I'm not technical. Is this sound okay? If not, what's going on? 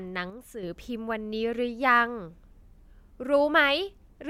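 No. From 0.30 to 0.63 s the speech suddenly gets noticeably quieter, then comes back. This is likely one channel dropping out. The left or right side briefly went silent, so only half the sound reached the mixed-down result.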